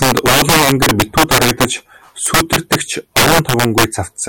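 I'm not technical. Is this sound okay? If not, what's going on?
No. Throughout the speech there is integer overflow: the level was pushed well past what the numbers can hold, and the loudest moments, roughly 7 percent of the sound, wrap around to the opposite extreme instead of being capped. Each one is a harsh crack.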